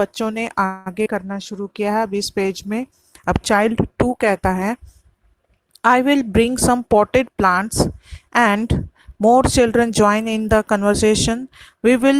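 From 0.65 to 0.88 s there is a call audio freeze, likely caused by packets being held up in transit until the jitter buffer ran dry. With nothing new to play, the receiver stretched the last sound into a fading buzz or hiss for about 206 ms, never dropping to silence. When the packets arrived, playback resumed exactly where it had stopped. Nothing is lost, but a gap of about 0.2 s has been inserted and everything after it now runs that much later.

At 1.04 to 1.08 s comes a short concealed packet loss. About 60 ms of audio never reached the decoder in time. The receiver covered the hole with only 16 ms of continued sound, built from the last pitch or from shaped noise, before blending back into real audio. It comes across as a quick smear or wobble where a brief sound may disappear. Because more was discarded than filled, it also takes back roughly 40 ms of the earlier delay.

Between 1.52 and 1.99 s a jitter buffer slow-down follows. 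The buffer needed to rebuild a reserve, so the receiver repeated single pitch periods and fragments of pauses again and again. Together these add 54 ms. Playback runs at 90% speed while the pitch stays the same, so sounds are drawn out.

From 6.7 to 10.11 s a jitter buffer speed-up sets in. The buffer was holding more audio than its target, so the receiver kept cutting out short slices of one or a few pitch periods. Across this stretch it trims roughly a fifth of a second. The audio plays at 106% speed with unchanged pitch, giving a slightly hurried, pressed-forward feel over those three and a half seconds.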